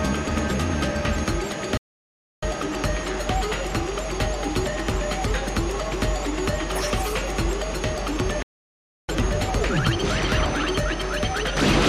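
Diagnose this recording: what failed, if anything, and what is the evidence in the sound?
Two rebuffering stalls at the playback stage: the sound drops to silence from 1.77 to 2.43 s and from 8.43 to 9.09 s, then resumes exactly where it stopped. Each adds about 0.65 s and 0.66 s without losing material, because the player's buffer ran dry awaiting more downloaded audio.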